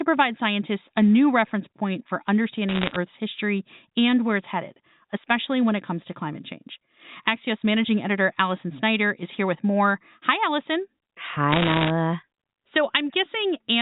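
Bit errors on a digital phone line crackle from 2.69 to 2.96 s, right after "new reference point for", and again from 11.52 to 11.90 s: flipped bits corrupt single samples, giving sharp ticks over the otherwise unchanged speech, through a G.711 path whose 4 kHz ceiling stays audible.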